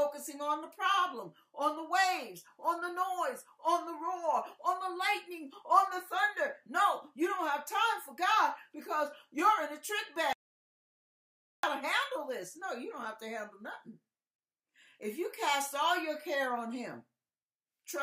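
At 10.33 s an audio dropout to silence wipes out 1.3 s, likely a lost input; unlike a natural pause, the gap to 11.63 s is dead silence, without room tone.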